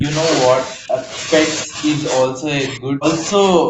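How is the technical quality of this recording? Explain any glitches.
The recording has one recurring glitch. Speech suppressed in double talk at 0.0–0.15, 0.68–1.03 and 1.64–1.82 s (dips of about 20 dB), then from 2.28 s to the end (about 40 dB). The speech is turned down, likely because the echo canceller mistook it for loudspeaker echo while the far side was talking.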